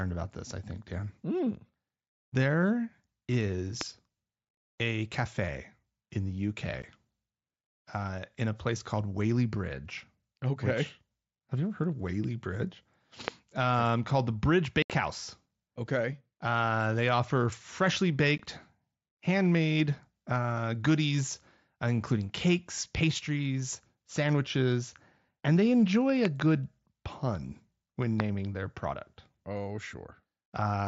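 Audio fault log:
3.81, 13.28, 26.25–26.42, 28.20: loud pop, sharp clicks standing about 20 dB above the sound (about 15 dB for the double pop after "sandwiches and they enjoy"), with speech continuing underneath. The 28.20 pop falls between "pun when" and "their product". The likely cause is a brief voltage spike, such as static or a driver glitch, shaped by the circuitry that follows.
6.82, 14.82–14.90, 18.38: unconcealed Bluetooth headset packet loss on the wideband mSBC link. Holes of 15 ms (after "a cafe in the"), 75 ms and 15 ms cut off abruptly. The lost headset packets were replaced by silence or an idle pattern rather than concealed, which fits frames of about 7.5 ms each.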